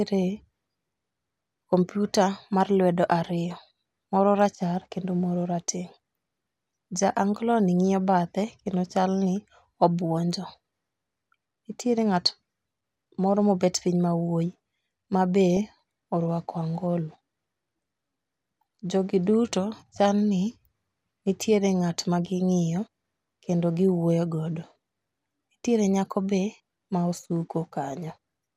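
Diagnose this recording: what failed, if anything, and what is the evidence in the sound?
A brief glitch at 15.57 s, just before "orwako angolo", is DAB burbling: a few uncorrected reception bit errors corrupted the MP2 audio data across two frames, putting noise blips into sub-bands or making them jump in level.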